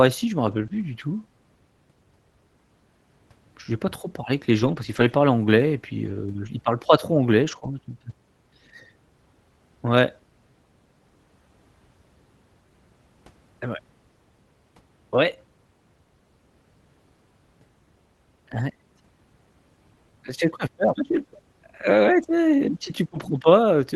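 Nine stretches of lost packets rebuilt from error correction, from 0.47 to 23.37 s, the longest 4.59 to 5.13 s: the decoder played the low-bitrate copies, so it's rougher and noisier, with no gaps. Short concealed packet loss sits inside three of those clusters, at 0.67 to 0.71 s, after "parlent pas trop anglais" at 7.59 to 7.63 s, and after "ouais tu es si" at 23.07 to 23.11 s. Each time about 20 ms was guessed from the preceding sound, so you get a quick smear or wobble. All of this comes over the Opus call path, which tops out at 12 kHz.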